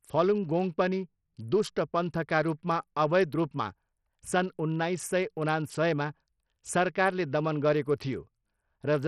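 A speech clip with Bluetooth SBC compression throughout: nothing above 14.4 kHz, treble flickering and gritty quantisation noise, likely from a starved bit pool around 64 kbps.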